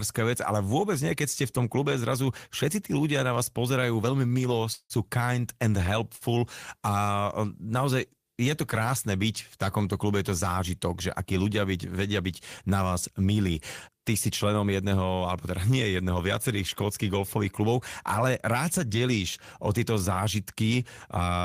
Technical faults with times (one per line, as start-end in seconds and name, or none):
4.27-4.33 short stall from a late packet
4.73-4.93 call audio freeze
6.16-6.24 short stall from a late packet
14.49-14.92 jitter buffer speed-up